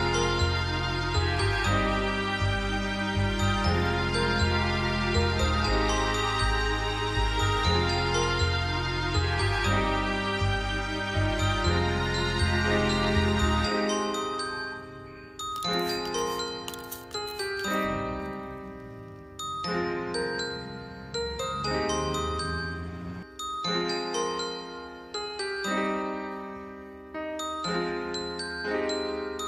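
No audible technical faults anywhere in the recording.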